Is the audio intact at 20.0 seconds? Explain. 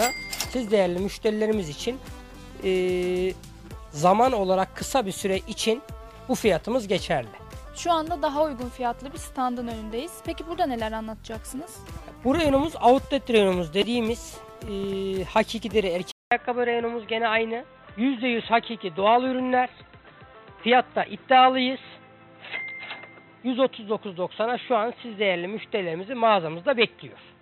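No. From 16.11 s to the end, after a 0.2 s gap, the sound turns dull and boxy, with nothing above 4 kHz. It is roughly 5 dB quieter, with a new noise floor around 35 dB down. This is likely an input switched to a poorer, narrower-band device.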